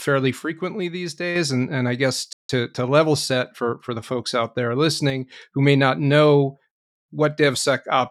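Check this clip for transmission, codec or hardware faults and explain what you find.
Three kinds of fault turn up: two level drops, a brief stall, and a sped-up stretch after it.

One channel drops out, likely, from 0.39 to 1.36 s and again from 5.10 to 5.32 s. The lost side leaves the mono sum abruptly about 6 dB quieter, then it recovers.

A playback stall, likely from the player running dry or being blocked, cuts the speech off mid-flow at 2.33 s for about 163 ms of silence.

Time-compressed catch-up follows from 2.49 to 4.11 s. The player trims and cross-fades small pieces to clear its backlog, so the speech runs about 1.1 times faster at normal pitch.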